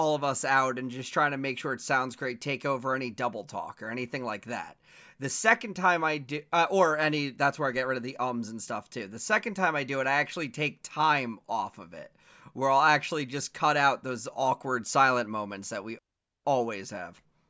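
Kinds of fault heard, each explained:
No technical faults can be heard in this speech recording, and the signal holds steady throughout with nothing breaking in on it.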